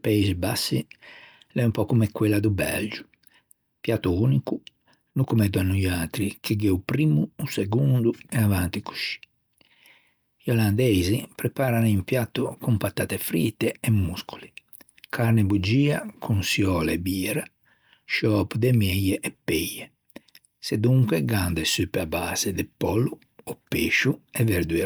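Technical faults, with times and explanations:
No technical faults found anywhere in the speech recording.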